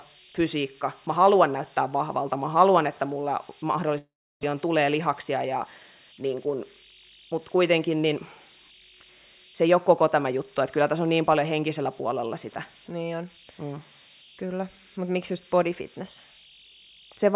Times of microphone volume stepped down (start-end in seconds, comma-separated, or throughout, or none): none